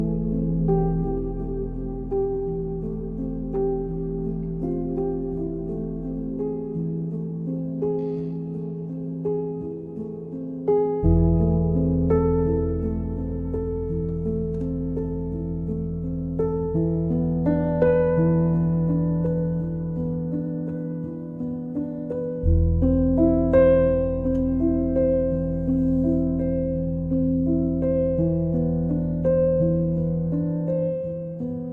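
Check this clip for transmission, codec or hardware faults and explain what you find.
No transmission, codec or hardware faults are audible anywhere in the clip.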